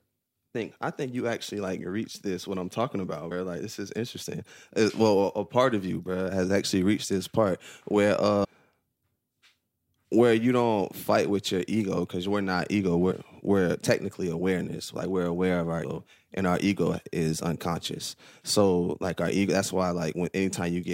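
Speech with compressed frames skipped at 0.54 s, before "I think you actually", at 3.30 s, after "this what I'm talking", and at 8.43–8.46 s, after "reached this part where". Runs of 23.2 ms frames, from a few to around twenty, are never decoded, so the audio lurches forward. Overlapping frames smear each join into a soft blip, visible as a spectrogram discontinuity without a hard waveform spike.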